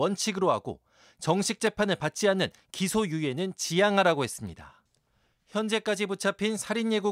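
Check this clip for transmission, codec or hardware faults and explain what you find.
Three sharp clicks interrupt the speech, at 1.67 s, 2.79 s and 4.87 s. These are likely dropped samples: a tiny fraction of a millisecond of the stream goes missing, so the waveform jumps abruptly, producing a brief click with no audible gap.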